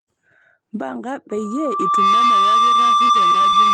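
Loudspeaker feedback squeal starts at 1.30 s and runs to the end. The microphone re-amplifies its own loudspeaker until a 1.2 kHz tone swells over roughly 0.7 s to about 10 dB above the speech.

Repeated packet loss (robotic sound) occurs from 3.07 to 3.54 s. Recurring gaps of up to 20 ms are patched by stretching the previous sound, which gives choppy, robotic speech.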